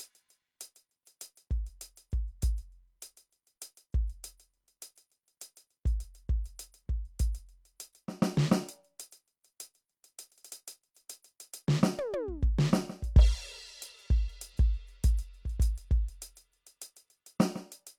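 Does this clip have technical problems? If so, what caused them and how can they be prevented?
No, nothing in this music recording points to a technical problem, so there is no cause to trace and nothing to prevent.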